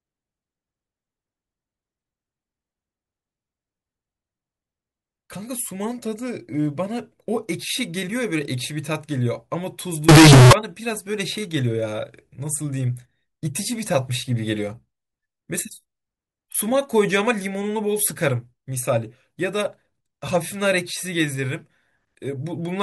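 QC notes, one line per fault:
10.09–10.53 s, float read as integer: the speech turns suddenly very loud and harsh, a near-square buzz at an almost fixed, high level with background noise as loud as the voice, though pitch survives. 32-bit float samples were likely read as 32-bit integers.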